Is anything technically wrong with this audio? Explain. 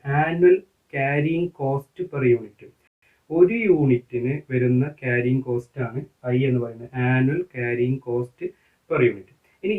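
Yes, there's one hiccup. At about 2.87 s the audio stops dead for 150 ms, then picks back up at 3.02 s exactly where it left off. That's a rebuffering stall: the player drained its downloaded buffer and had to sit in silence until more data arrived. Nothing gets skipped or repeated; you just hear a short gap, and the clip runs 150 ms longer than it should.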